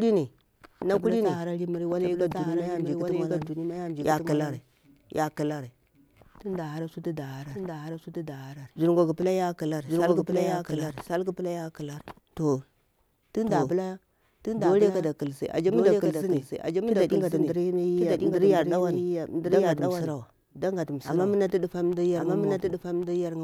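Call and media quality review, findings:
Doubled audio track throughout: speech repeated about one second late, roughly 5 dB quieter, no decay or room colour. Likely a second capture path mixed in.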